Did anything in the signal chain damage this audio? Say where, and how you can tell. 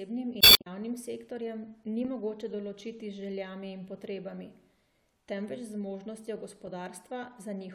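Yes. From 0.38 to 0.67 s a short burst of corrupted decoding breaks into the speech just before "sektorjem ni mogoče določiti", adding about 66 ms. This is damaged data in a compressed stream: corrupted bytes made the decoder misread frames and lose sync until the next valid frame header.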